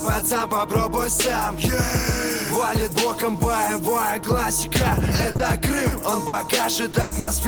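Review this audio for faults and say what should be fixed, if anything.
Short concealed packet loss occurs at 5.31 to 5.37 s (40 ms), immediately followed by 5.37 to 5.41 s (20 ms), and again at 6.91 to 6.95 s (20 ms). In each case, packets failed to reach the decoder in time. The receiver covered the hole by extending the preceding sound, repeating its pitch where it was voiced or substituting shaped noise where it was not, then crossfaded back into the real signal. The result is a brief smear or wobble, longest in the back-to-back pair near 5.3 s.

Burst of packet loss occurs at 6.27 to 6.35 s (60 ms), 7.01 to 7.13 s (100 ms) and 7.19 to 7.29 s (80 ms). Here several consecutive packets went missing, so the concealment had to run longer, continuing the last sound and gradually turning it down. It comes across as a held buzz or fading hiss, with no drop to silence in the 7.01 s burst. Playback then picks up further along, and whatever fell inside each gap is simply gone.

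To prevent these, give the receiver a deeper jitter buffer and send forward error correction or redundant packets over a steadier network path, so late or lost packets can be recovered rather than concealed.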